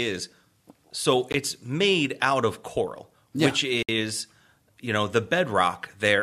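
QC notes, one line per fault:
1.32 s and 3.83–3.89 s, Bluetooth stall: speech cuts to dead silence for 18 ms, then 61 ms, and resumes where it stopped or slightly later, likely because interference delayed packets until the headphone buffer ran dry. The waveform shows flat silent gaps, and the spectrogram shows narrow full-band blank columns.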